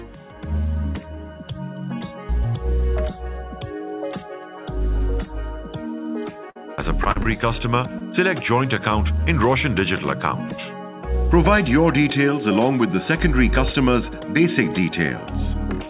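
Repeated packet loss (robotic sound) runs from 6.5 to 7.27 s, where five dropouts, the longest 53 ms, are patched by extending the preceding sound, leaving it choppy. Short concealed packet loss follows at 7.99 to 8.02 s: a 20 ms hole filled from the last sound and blended back, heard as a brief smear or wobble. Throughout, the audio carries a call path whose content stops at 4 kHz, which fits a narrowband G.711 telephone codec.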